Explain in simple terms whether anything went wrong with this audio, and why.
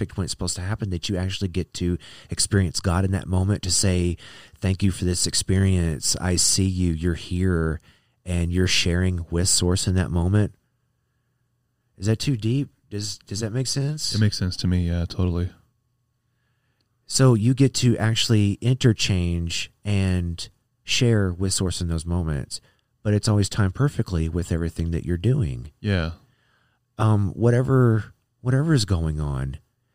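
Nothing went wrong here that I can hear: the speech carries on steadily with no dropouts, glitches or odd noises getting in the way.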